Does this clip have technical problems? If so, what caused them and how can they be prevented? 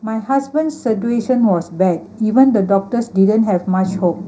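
Yes. Channel delay (comb filtering) is present throughout. One channel arrives a fraction of a millisecond late, and summing to mono cancels the shared content at evenly spaced frequencies. The first notch falls around 3 kHz, which leaves the speech hollow and phasey. To prevent it, time-align the channels before the downmix, or use a single channel.

Automatic gain rising occurs from 0.05 to 2.11 s. The gain control judged the input too quiet and raised its gain gradually by about 7 dB, so the speech and the background swell together. To prevent it, set a correct input level at the source or disable automatic gain control.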